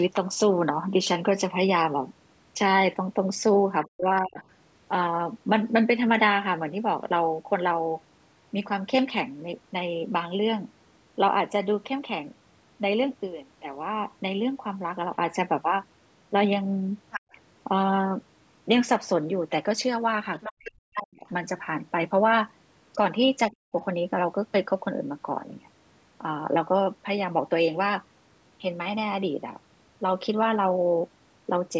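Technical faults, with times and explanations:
3.85–4.4 s, 20.57–21.26 s and 23.51–23.73 s: speech suppressed in double talk. The talker's speech sinks by as much as roughly 40 dB, briefly at first, then for most of a second, then for a short moment. The likely cause is that both sides were talking at once and the echo canceller could not tell the talker from loudspeaker echo, so it turned both down.
4.16–4.43 s, 17.11–17.35 s, 20.41–20.53 s and 22.93–22.98 s: other side's voice leaking through. A second voice comes through. It is faint at 4.16 and 22.93 s but much more noticeable at 17.11 and 20.41 s, where it sits only around 10 dB under the talker. The echo canceller likely left part of the loudspeaker playback in the microphone signal.
17.2–17.32 s: background gated by the echo canceller. During the leak around 17.1 s, the room sound drops away by about 36 dB for roughly a tenth of a second and then returns. 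The canceller clamped the microphone hard while the loudspeaker was playing and then let go.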